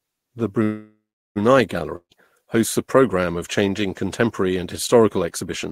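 From 0.63 to 1.38 s, packets were likely held up in transit and the jitter buffer drained, a call audio freeze. The receiver stretches the last sound into a fading buzz that settles into about 370 ms of near-silence, filling roughly 720 ms in all. When the delayed packets arrive, the speech resumes exactly where it stopped. Nothing is lost, but everything afterwards now plays about 720 ms later than before.

From 1.96 to 2.13 s there is a long network dropout. Here the incoming packets were most likely lost outright rather than delayed. The receiver again carries the last sound forward as a decaying hiss for about 150 ms, ending in roughly 80 ms of silence. When the speech returns, about 160 ms of it is gone, so it picks up further along and the words seem to skip ahead.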